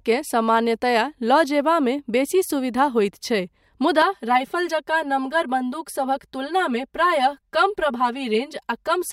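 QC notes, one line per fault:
4.02–9.13 s, channel delay (comb filtering): from 4.02 s the speech turns hollow and phasey. One channel arrives around 5 ms late, and summing to mono cancels the shared content at evenly spaced frequencies, starting near 100 Hz and repeating roughly every 200 Hz. A spectrogram shows fixed dark horizontal notch bands that stay put through to the end.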